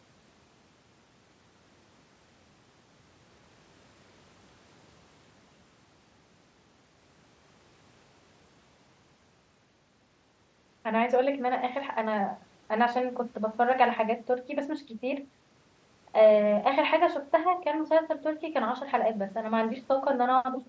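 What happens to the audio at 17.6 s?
Nothing goes wrong at 17.6 s; the speech carries on intact through that moment, with the 8 kHz ceiling of the Bluetooth mSBC headset link and the call's microphone processing heard as normal.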